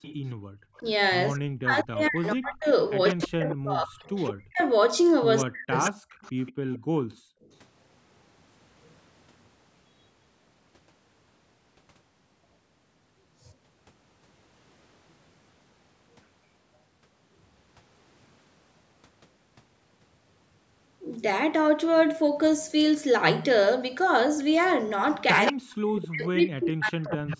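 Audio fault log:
0.02–7.5 s and 25.46–27.37 s, echo leak: a delayed copy of the speech follows the talker by 164 ms. It is well below the direct voice at first and nearly as loud near the end. The likely cause is a far-end loudspeaker whose echo canceller let part of its microphone pickup back into the call.
0.36–0.52 s and 6.55–7.42 s, background gated by the echo canceller: the room sound drops out sharply, by about 35 dB in the brief first dip and about 39 dB across most of the second. The canceller clamped the microphone while its loudspeaker played, then released it.
0.8–5.99 s and 25.51–27.40 s, speech suppressed in double talk: while both sides talk, the near voice dips and breaks up in pieces, losing around 40 dB at worst over roughly 3 s and then 2 s. The likely cause is the canceller treating overlapping speech as echo and suppressing both.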